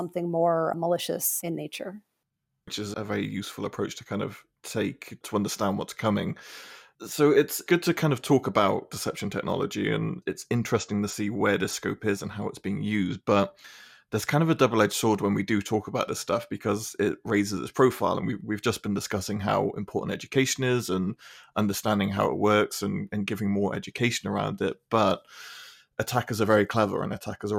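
No technical faults can be heard anywhere in the recording, and the signal holds steady throughout.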